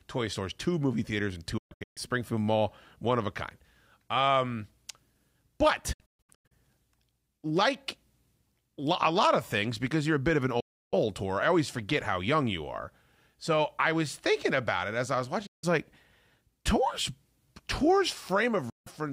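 Digital broadcast dropouts occur at 1.58–1.98 s after "two movie theaters and", 5.93–6.52 s, 10.60–10.94 s after "a bit of an", 15.46–15.64 s after "it as I was", and 18.70–18.87 s. The receiver mutes on lost frames with 8 ms fades to silence, and the first two break into several holes of up to 128 ms. Concealment would instead smear or warble over the gaps.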